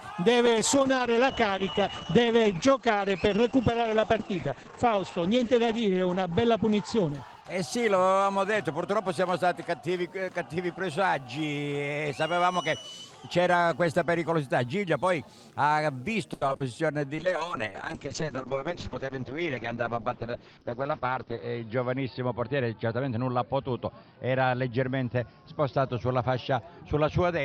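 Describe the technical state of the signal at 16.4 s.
At 16.4 s the audio sits inside a burst of repeated packet loss (robotic sound), running from 16.33 to 16.62 s. Several short holes, the longest 80 ms, are patched by extending the preceding sound. About half the stretch is concealed this way, so it comes out choppy. A spectrogram shows smeared, frozen harmonic bands and abrupt breaks, and the waveform shows repeated cycles with chopped edges.

Computer activity noise also runs through this moment, as it does across the whole clip. Load changes in the computer disturb the audio ground, adding a faint buzz with pulses repeating at roughly 150 Hz, about 45 dB below the signal. A spectrogram shows thin, evenly spaced lines that come and go independently of the sound.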